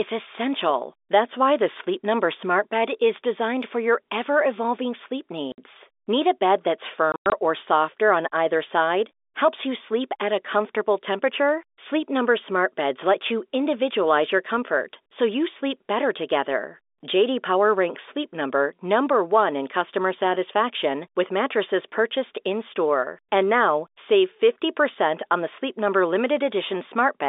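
Packets were dropped in transit and the receiver filled each gap with silence, causing packet loss. After "your ever evolving sleep" a 60 ms hole opens at 5.52–5.58 s, and between "a bed that's" and "or softer on either" scattered dropouts from 7.12 to 7.32 s remove 140 ms, the longest 100 ms. Both fit 20 ms packets, and each hard-edged gap cuts into the narrow telephone-band G.711 sound.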